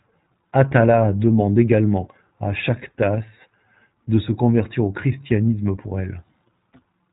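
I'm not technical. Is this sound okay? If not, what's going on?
No. The speech went through the iLBC codec, a phone-call compressor that handles the sound in 20 ms chunks and drops everything above about 3.8 kHz. Throughout the clip, that makes it sound muffled and phone-like, with a plainly audible rough, slightly robotic edge.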